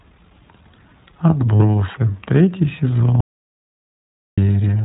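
Speech, heard throughout through the iLBC codec. Nothing above 4 kHz survives, and the voice sounds slightly rough and synthetic. The damage is plainly audible. The coding fits iLBC's 20 ms frame mode at around 15.2 kbps, where each frame is coded on its own. At 1.56 s to 1.62 s there are lost iLBC frames. About 40 ms is missing, which suggests two dropped frames. The decoder fills the gap by repeating the last pitch cycle with added noise, so a short buzzy, held vowel stands in. Clear speech returns at once. From 3.21 s to 4.38 s comes an audio dropout to silence lasting about 1.17 s. The sound cuts off mid-flow into silence, with no room tone. It then resumes abruptly. The likely cause is a lost input, with the recorder writing silence until it came back.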